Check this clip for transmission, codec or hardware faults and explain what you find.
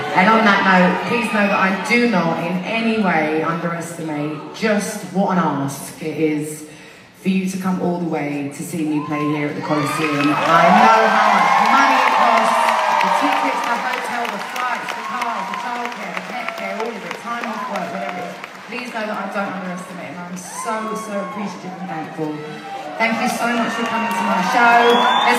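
No transmission, codec or hardware faults can be heard anywhere in the clip. There is nothing to report or explain.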